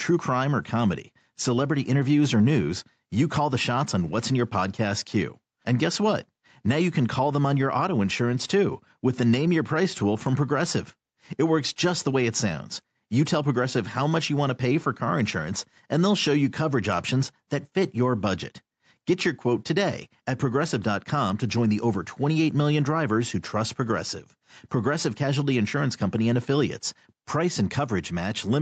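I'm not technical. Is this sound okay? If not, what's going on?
No. There is gain pumping all the way through. The loud and soft parts end up closer in level. The level is likely set too high, so an automatic limiter keeps pulling it back. The speech sounds squashed.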